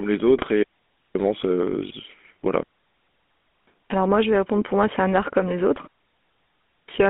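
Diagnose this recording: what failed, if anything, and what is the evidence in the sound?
Codec stage: GSM full-rate codec coding throughout, with plainly audible buzzy, gravelly roughness and a band squeezed to roughly 200 Hz to 3.5 kHz, fitting 13 kbps full rate.

Network stage: GSM bit errors from 0.34 to 0.44 s, where corrupted filter, pitch or gain values make the audio squawk and gargle briefly.

Wireless link: three digital wireless dropouts, clean muted holes with no noise burst, at 0.63 to 1.15 s, 2.63 to 3.67 s, and 5.87 to 6.89 s, right after "art comme les autres". The receiver lost too much data and muted.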